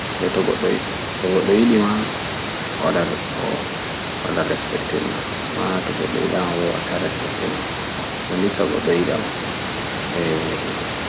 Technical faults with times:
none

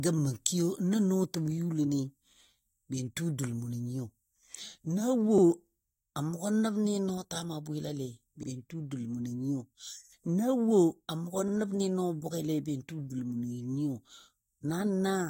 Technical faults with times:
2.33-2.38 overlapping chunks
5.38-5.43 overlapping chunks
8.43-8.48 overlapping chunks
11.48-11.53 overlapping chunks
14.53-14.58 overlapping chunks

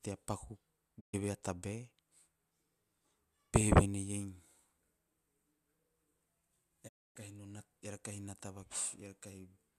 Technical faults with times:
0.99-1.15 digital broadcast dropout
6.87-7.17 digital broadcast dropout

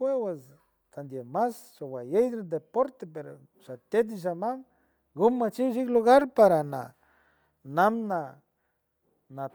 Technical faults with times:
0.00-9.55 Bluetooth LC3 compression

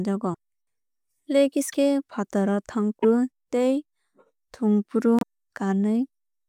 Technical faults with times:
0.33-0.35 broken MP3 bit reservoir
1.71-1.74 broken MP3 bit reservoir
3.02-3.05 broken MP3 bit reservoir
5.19-5.23 broken MP3 bit reservoir

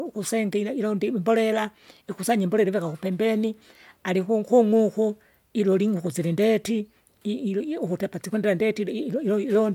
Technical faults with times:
none

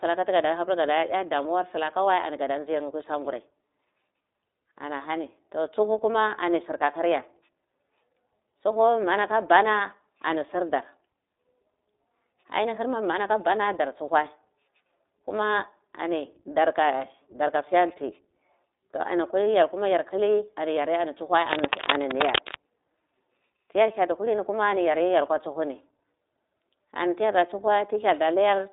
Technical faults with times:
0.00-28.72 iLBC codec
21.47-22.56 cable scratch noise

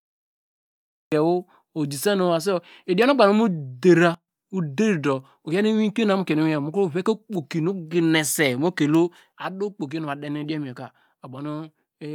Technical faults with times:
0.00-1.12 cut-off start
4.14-4.28 sudden gain jump
9.32-12.15 sudden gain jump

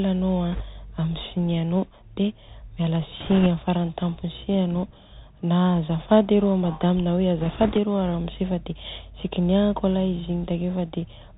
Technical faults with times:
0.00-11.38 Bluetooth CVSD headset codec
0.52-0.63 bit errors on a Bluetooth voice link
3.20-3.47 bit errors on a Bluetooth voice link
7.40-7.78 bit errors on a Bluetooth voice link

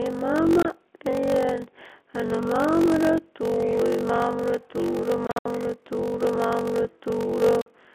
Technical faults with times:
0.00-7.95 block size mismatch (padded)
0.63-0.65 packet loss filled with silence
5.27-5.46 packet loss filled with silence
7.61-7.66 packet loss filled with silence

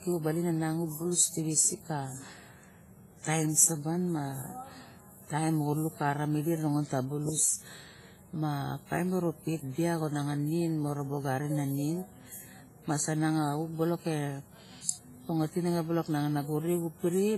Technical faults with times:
0.00-17.38 WMA compression

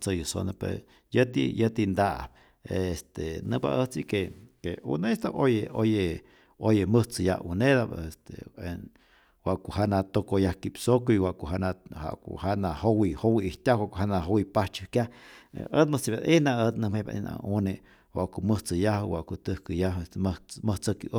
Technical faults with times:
14.96-17.28 drift correction step

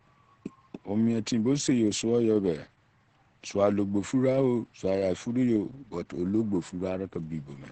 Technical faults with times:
0.00-7.72 Opus voice compression

